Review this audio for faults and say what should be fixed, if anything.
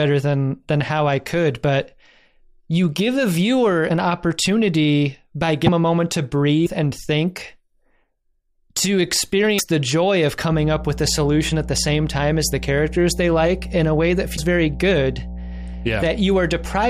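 Broken MP3 bit reservoir: roughly 30 ms skips at 3.88 s (between "you give a viewer" and "opportunity by"), 5.66 s (just before "a moment to"), 6.65, 9.58 and 14.36 s. These are likely from dropped MP3 frames, whose successors fetch the wrong reservoir bytes. Each skip is about one 26 ms frame long, which separates them from random clicks. Prevent this by cutting or streaming MP3 only on complete frame boundaries with the reservoir intact, or by editing from an uncompressed source.

Mains hum: from 10.52 s, just after "the joy of", to the end there is a steady 60 Hz tone, fairly strong at roughly 10 dB below the signal. It is a sustained pitched drone, not broadband hiss. Prevent it by breaking the ground loop with balanced cabling or a ground-lift isolator and by keeping cables away from transformers.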